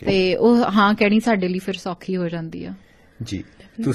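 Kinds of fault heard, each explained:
Adaptive stream at a lower bitrate: the player switched to a cheaper encoding of the same speech when the connection slowed, with no gap in playback. From 0.97 s to the end, the treble above 13.6 kHz is suddenly gone and codec artefacts become more noticeable. This is consistent with AAC-LC dropping from roughly 96 kbit/s to 32 kbit/s.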